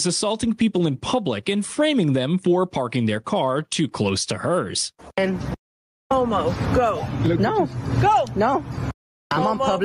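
Gain pumping throughout, swinging roughly 20 dB, likely from excessive gain hitting a fast limiter, not gating.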